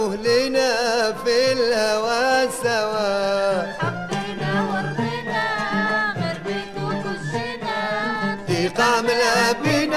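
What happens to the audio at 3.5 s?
Nothing goes wrong at 3.5 s: the audio plays through that moment intact, with no dropout, click or other audible fault.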